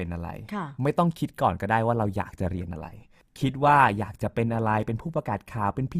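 At 1.94 s the speech switches abruptly to a lower-bitrate rendition of the adaptive stream and stays there until the end of the clip. The connection slowed, so the player fetched a cheaper encoding. The sound fits a step from 64 kbit/s Opus down to 24 kbit/s, and codec artefacts rise from that point. Unlike packet loss or a dropout, there is no gap or stutter. The quality simply steps down at once and holds.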